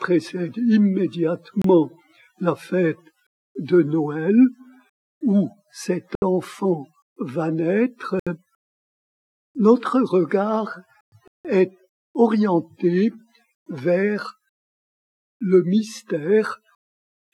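Bluetooth stalls break the sound into silence four times: at 1.62 s for 27 ms, 6.15 s for 70 ms, 8.20 s for 71 ms, and 11.28 s for 171 ms. Each is likely a wireless dropout, where held-up packets let the receiver's buffer empty, so playback halts abruptly, then resumes once retransmitted audio arrives.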